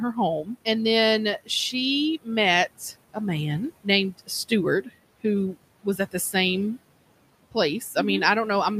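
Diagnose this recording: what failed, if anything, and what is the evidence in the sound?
The call-processing stage failed through noise suppressor artifacts across the whole clip. The background sits about 20 dB under the speech, yet drops by about 18 dB between phrases and swells back under them. Per-band, frame-by-frame gain causes this rise and fall.

Speech cut by the noise suppressor occurs from 4.82 to 4.92 s, also in call processing. For about a tenth of a second the speech falls by up to about 13 dB and sounds swallowed. The suppressor misread this speech as noise and attenuated it.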